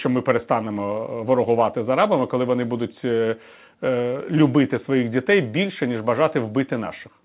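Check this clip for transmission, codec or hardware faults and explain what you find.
No faults can be heard: the speech comes through a call path whose band stops at 4 kHz, which fits G.711 mu-law telephone coding, and the signal shows nothing beyond what that path normally produces.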